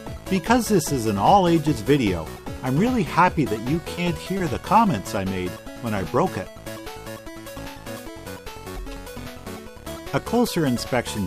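At 3.95 s and again at 4.37 s there is short concealed packet loss: each time about 20 ms of audio failed to arrive in time, and the receiver covered the gap by extending the preceding sound for roughly 20 ms before blending back, so each event spans about 40 ms. Each is heard as a brief smear or wobble. Unlike a plain dropout or click, there is no hole of silence and no sharp edge. The sound carries on, just blurred for an instant.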